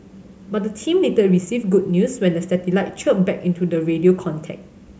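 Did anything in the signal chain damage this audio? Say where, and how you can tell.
No, nothing in the chain damaged this speech.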